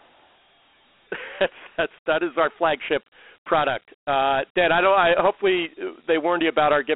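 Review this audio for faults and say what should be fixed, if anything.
Dialogic VOX ADPCM throughout: coarse 4-bit step adaptation leaves gritty hiss riding the speech, and the spectrogram sits in a 300 Hz–3.4 kHz band, empty above 3.9 kHz.

To prevent this, record or export at a wideband rate in a linear PCM format rather than the 32 kbps VOX telephony encoding.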